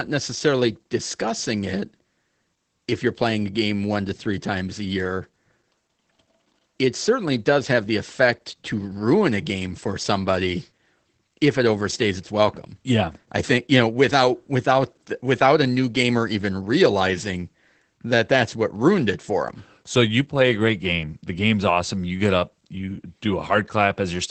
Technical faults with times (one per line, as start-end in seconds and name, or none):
0.00-24.30 Opus voice compression